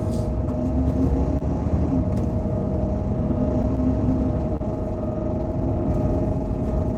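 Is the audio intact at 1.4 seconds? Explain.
No. Short concealed packet loss hits the audio from 1.37 to 1.42 s. About 20 ms of the stream arrived too late for the decoder. The receiver covered the gap by extending the preceding sound, carrying its pitch forward where there was one and using shaped noise where there wasn't. That patch lasts about 29 ms before it blends back into the real signal. It comes across as a brief smear or wobble, and a very short sound there can drop out.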